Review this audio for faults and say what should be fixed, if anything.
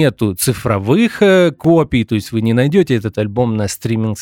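At 1.64 s the speech has a repeated buffer. Playback ran out of fresh audio, so the device replayed its last chunk of about 1.45 ms two extra times, which fits a 64-sample buffer. With segments that short, the repeats sound like a brief click or buzz rather than a stutter, and essentially no audio is lost. On a waveform, the same tiny shape appears three times in a row with abrupt joins. A spectrogram shows a thin vertical broadband streak at each join. To prevent it, give the playback path enough buffering headroom and scheduling priority that a new buffer always arrives before the current one finishes.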